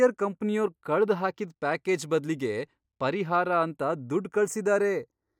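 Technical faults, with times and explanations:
Throughout: channels drifting apart; a clock mismatch of roughly 70 ppm slides the delay to about 0.2 ms, sweeping mono comb notches as slow flanging.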